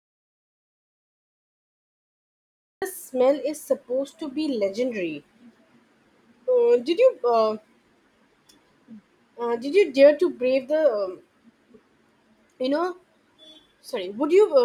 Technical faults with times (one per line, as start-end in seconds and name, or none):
0.00-2.82 audio dropout to silence